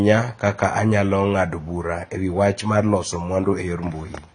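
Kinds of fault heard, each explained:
AAC compression: Throughout, the speech sounds dull and smeared, with nothing above 9.6 kHz and a plainly audible warbling, fizzy texture. This is likely from AAC-LC coding that quantised its frequency lines coarsely and lowered the cut-off, which fits a bitrate near 24 kbps.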